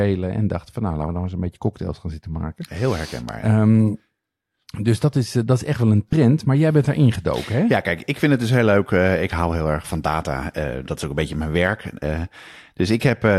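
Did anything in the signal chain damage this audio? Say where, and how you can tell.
Yes. At 6.09 to 6.13 s, between "is echt wel een" and "maar jij bent daar", lost LE Audio frames break the Bluetooth link for 37.5 ms, which fits about five LC3 frames. The decoder concealed the gap by repeating the last spectrum with random signs, so the speech turns into a brief noisy smear.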